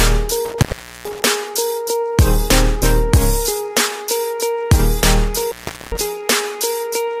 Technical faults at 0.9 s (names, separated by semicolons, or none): intermittent contact